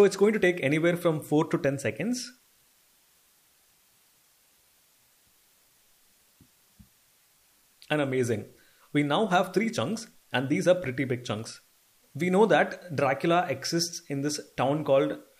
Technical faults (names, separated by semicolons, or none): low bit depth with dither